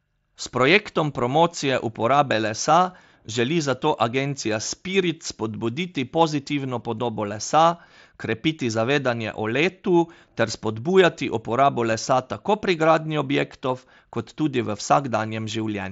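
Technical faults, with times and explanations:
11.91 s, concealed Bluetooth headset packet loss: A single voice packet between headset and phone went missing, a gap of 7.5 ms that fits one lost frame, between "ter spodbujati uporabo" and "lesa tako". The receiver filled it by repeating the closest-matching piece of the waveform just before. One such patch is nearly hidden in the speech carried over the mSBC headset link.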